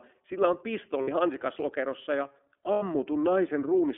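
A short speech clip carried through the iLBC codec, the narrowband VoIP coder. Nothing reaches below about 250 Hz or above 3.4 kHz, so a spectrogram shows a flat ceiling with empty space above it. Each block of signal is coded on its own from a compact model of the excitation, leaving the voice clear but plainly rough and slightly synthetic. The fine harmonic striations look smeared and grainy, which fits the 30 ms frame mode at around 13.33 kbps.

There are two sets of lost iLBC frames. The first runs from 1.02 to 1.09 s, about 60 ms, just before "hansikaslokerossa ja". The second runs from 2.73 to 2.83 s, about 90 ms, just after "hansikaslokerossa ja". At each gap the decoder fills in by repeating the last pitch cycle blended with noise, so you hear a brief held, buzzy-breathy vowel. On the waveform this shows as an unnaturally regular, repeating cycle that tapers in level, most clearly in the longer gap. 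On the spectrogram it appears as a frozen patch of steady harmonics with a noisy haze. The gap lengths fit two and three 30 ms frames. Because each frame decodes independently, normal speech resumes almost immediately after each gap.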